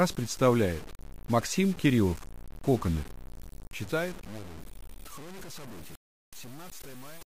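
The whole clip has a grainy, gritty distortion that tracks the sound itself, getting rougher as things get quieter, with the faintest parts sputtering or dropping out. That's low bit depth without dither, likely truncation to about 6 bits, leaving error only around 20 dB down.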